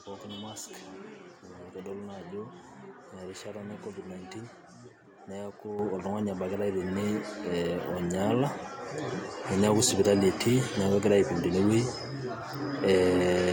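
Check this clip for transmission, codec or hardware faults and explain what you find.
The clip has two microphone volume stepped up events, at 5.79 s (about 8 dB) and 7.83 s (about 2 dB). Input gain was raised in single steps after the level was judged too low, so speech and background noise jump louder together, instantly.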